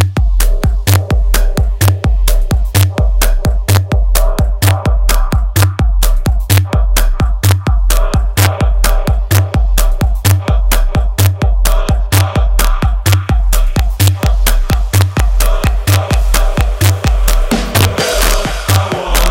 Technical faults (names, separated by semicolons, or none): integer overflow